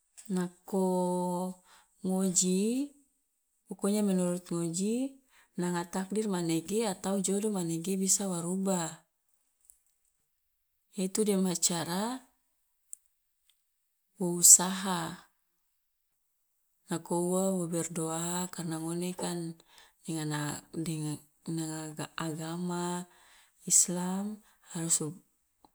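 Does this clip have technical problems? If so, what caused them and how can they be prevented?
No, there are no technical problems in this clip.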